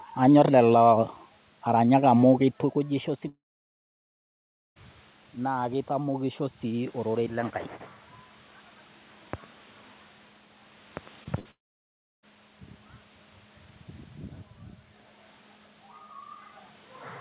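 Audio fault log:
3.28–4.78 s and 11.51–12.25 s, long network dropout: the sound carries on briefly as a fading buzz, then drops to near silence, about 1.38 s in the first gap and 0.67 s in the second, before resuming further on with about 1.48 s and 0.72 s of material gone. A stretch of audio likely never arrived, and the receiver could only extend the last sound for a moment before giving up. Unlike a burst loss, the fill gives way to silence, so a clear hole is heard. The level change near 2.5 s, just before the first gap, is the talker moving.
5.45–7.59 s, automatic gain rising: over roughly two seconds the voice and the room noise swell together by about 4 dB. The gain control is lifting a quieter input, down about 13 dB, and the room noise rises with the voice because the whole signal is turned up. When a talker moves, as happens again near 16 s, only the voice level changes.
11.24–11.27 s, short concealed packet loss: a brief smear or wobble where about 20 ms of audio was lost and roughly 14 ms was filled by extending the preceding sound before blending back. 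It is shorter than the burst that follows.
11.39–11.47 s, burst of packet loss: about 60 ms is missing, filled by a held, decaying continuation of the last sound, and the audio resumes slightly further on. It is longer than the smear at 11.24 s but far shorter than the dropout that starts at 11.51 s. Throughout, nothing is heard above 4 kHz, which fits a narrowband G.711-type call path.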